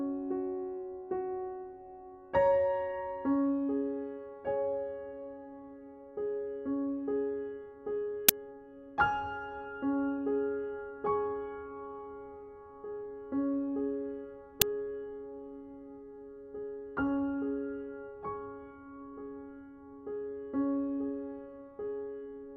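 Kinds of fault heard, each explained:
Uninitialised buffer: at 8.29 s and 14.62 s there are abrupt, loud cracks lasting 10 ms and 5 ms. An output block was sent to playback before any audio was written into it, so stale memory contents were played as samples.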